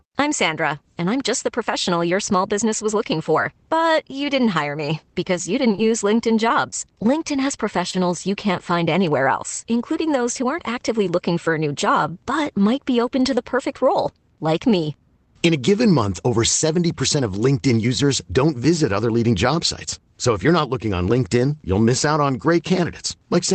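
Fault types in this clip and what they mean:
Scattered short gaps: after "hire me because you", 5.75 to 7.95 s, about seven holes get patched by continuing the last sound, leaving quick ticks.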